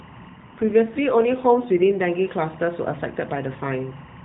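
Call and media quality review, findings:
Steady chirping warble behind the speech for the whole clip, flipping between roughly 1 kHz and 2 kHz, about 25 dB under the voice. Timecode bleed: 23.976 fps linear timecode leaking from an adjacent track or cable.

Voice turns rough, buzzy and synthetic from 0.30 to 2.10 s. It stays within the same 4 kHz AMR-NB band, with no gap, then clears. AMR rate drop: the network forced the codec down, consistent with 12.2 falling to 5.9 kbps, trading bits for error protection.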